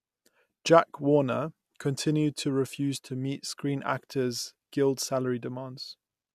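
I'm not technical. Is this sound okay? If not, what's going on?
Yes, it sounds fine, with nothing going wrong anywhere in the recording that you'd need to worry about.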